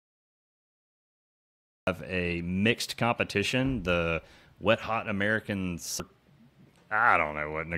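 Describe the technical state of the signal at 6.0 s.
At 6.0 s the speech is broken by a very brief burst of damaged data in the compressed stream, lasting only a few milliseconds. Some bytes in the encoded stream are wrong at that point, so the decoder misreads the affected frame, loses its place and must find the next valid frame header before decoding resumes. What comes out is a short chirp, squawk, click or short hole.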